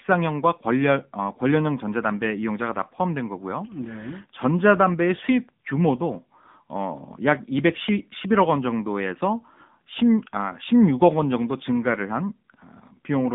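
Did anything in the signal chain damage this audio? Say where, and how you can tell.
Yes. The damage happened at the codec stage. For the whole clip, the speech has passed through the AMR narrowband mobile codec, at a low rate that fits a mode of roughly 8 kbps. The codec rebuilds the voice from a vocal-tract model driven by sparse pulses in 5 ms subframes, and here that gives the voice a plainly audible buzzy, synthetic edge. The line band runs from about 150 Hz to 3.6 kHz, and nothing passes above 3.7 kHz, so sibilants and air are gone.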